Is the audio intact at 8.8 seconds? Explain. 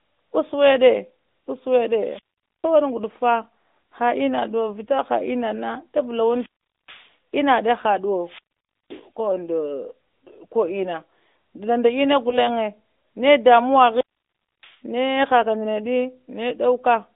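No. A wireless microphone squelch dropout runs from 8.14 to 9.10 s: the FM signal fades, hiss rises, then the receiver mutes the speech for 0.52 s until "ka undu".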